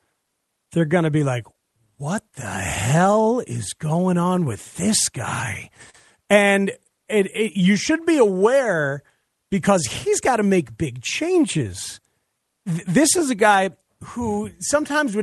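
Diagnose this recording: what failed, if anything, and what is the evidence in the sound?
The sender's audio clock runs slow against the receiver's, about 3 percent, a clock drift between sender and receiver at the buffer stage of this Opus call path. The jitter buffer keeps running short, so the speech never holds a fully even pace.

Repeated timing corrections come from the receiver's jitter buffer. It stretches the speech to stay in step: from 0.66 to 5.13 s the pace drops to about 98 percent, adding roughly a tenth of a second, and from 7.20 to 15.23 s to about 97 percent, adding roughly 0.2 s.

A short stall from a late packet occurs at the network and buffer stage. From 5.90 to 5.95 s the buffer ran empty and the receiver held the last sound for 39 ms until the packet arrived. Nothing is lost, but that sound lingers with a faint buzzy dip before the speech resumes.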